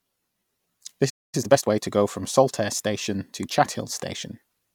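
At 1.09 s the speech cuts to silence for about a quarter second, until 1.35 s: a playback stall, likely the player running dry of data or its thread being blocked.

From 1.35 to 1.81 s, just before "go from", the speech runs hurried at normal pitch. This is time-compressed catch-up, trimming the backlog at about 1.5 times speed.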